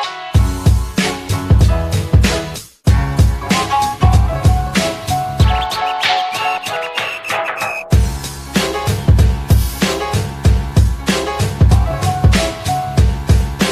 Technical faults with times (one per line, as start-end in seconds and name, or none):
none